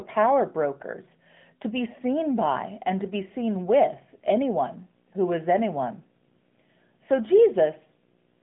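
Speech, carried through the AMR narrowband mobile codec for the whole clip. Nothing passes above 3.8 kHz, and the line band runs from about 150 Hz to 3.5 kHz. The codec damage is plainly audible as a buzzy, synthetic edge, which fits a bitrate near 10 kbps. From 1.82 s, just after "brokers to be", video or display buzz joins and stays to the end. A buzz at the 59.94 Hz field rate carries hash above it, with a 15.7 kHz line tone. It sits roughly 35 dB below the speech. A screen or video cable is coupling into the audio path.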